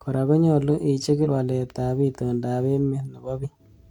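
A short chirp, squawk, click or hole at 1.21 s, just before "walet ab", and again at 3.39 s is damaged data in the compressed stream: the decoder lost frame sync briefly.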